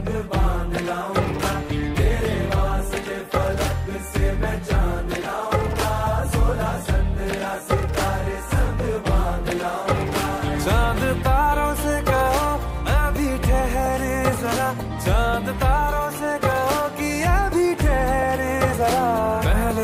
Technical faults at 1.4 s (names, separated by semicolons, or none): none